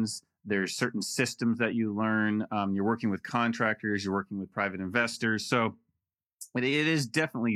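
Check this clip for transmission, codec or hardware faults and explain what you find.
Nothing in the speech signal points to a problem introduced by transmission, encoding or the playback hardware.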